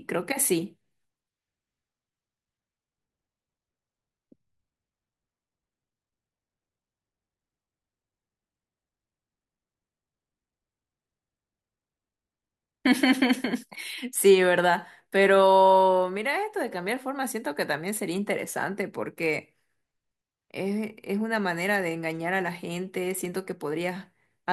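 No technical faults can be heard in the clip.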